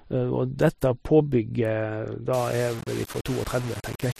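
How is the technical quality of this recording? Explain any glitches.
The first half is clean speech, but quality drops sharply at 2.33 s. From there to the end the sound turns grainy. This is low bit depth without dither. Rounding to about 5 bits likely left coarse steps. The error tracks the speech, leaving distortion about 15 dB below it.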